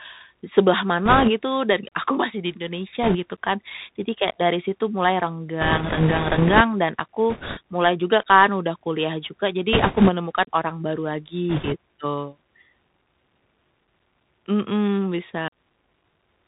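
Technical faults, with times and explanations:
Throughout: Bluetooth CVSD headset codec. The speech is narrowband and dull, cut off above 4 kHz, with scratchy s sounds and granular hiss, as the one-bit 64 kbps delta coder's adapting step lags behind loud high sounds and hunts around quieter ones.
1.05–1.29, 3.03–3.17, 5.61–6.61, 7.30–7.59, 9.73–10.10, 11.50–11.76 s: bit errors on a Bluetooth voice link. Rushing, crackly noise sits over the speech without loud clicks, because each flipped bit, at a rate of a few percent, only nudges the signal and quickly fades.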